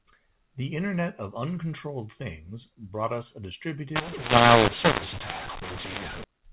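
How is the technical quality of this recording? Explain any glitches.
The recording has one real glitch, covering the last stretch of the clip; the first part carries the usual narrowband telephone sound, with nothing above 4 kHz.

From about 3.96 s to 6.24 s you get mu-law and A-law mixed up. The speech was coded as G.711 A-law but decoded as mu-law, so every 8-bit code maps to the wrong level on the log curve. Loud parts come out mis-scaled and the quietest samples jump well above silence. The speech turns harsh and gritty, and the gaps fill with noise.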